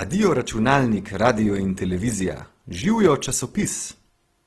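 From start to finish the speech sounds grainy and rough, with a hissy, noise-filled texture and nothing above 12.1 kHz. That points to Opus compression, likely in its music mode at a starved bitrate around 16 kbps, filling bands with noise.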